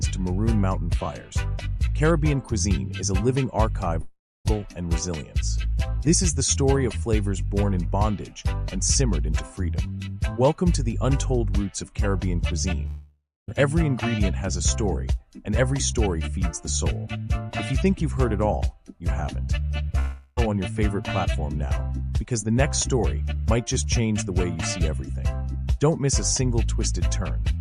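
The audio has three gaps, at 4.01–4.47 s, 12.87–13.50 s and 19.99–20.39 s. In each, the last sound continues as a fading buzz or hiss before the audio resumes with roughly 0.44 s, 0.62 s and 0.38 s missing. The first two fades end in about 0.28 s and 0.27 s of silence; the third runs to the restart with no silent tail. This pattern is likely a long network dropout, with the receiver concealing the lost stretch.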